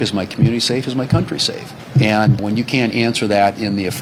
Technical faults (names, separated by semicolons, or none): none